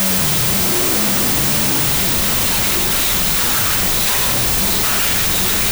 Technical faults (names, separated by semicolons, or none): wrong sample width